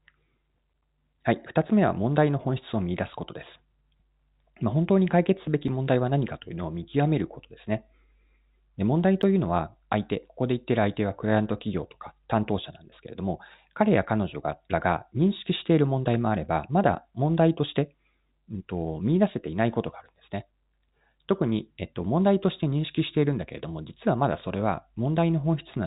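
Underruns with held sample occur at 5.68 s and 9.22 s in this telephone-band speech clip, which is limited to about 3.8 kHz by G.711 A-law coding. Each time, the output buffer ran dry, so the converter held its last sample value. The waveform goes flat for 2.9 ms and then 10.2 ms, the first fitting a 128-sample buffer. About 3 ms and 10 ms of live audio were lost.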